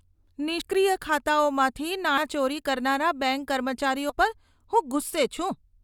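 Compressed frames get skipped three times: at 0.61 s, at 2.17 s just before "ચોરી કરનારા બેંક", and at 4.09 to 4.13 s right after it. Each time a few 20 ms frames never play, so the speech jumps ahead around 70 ms.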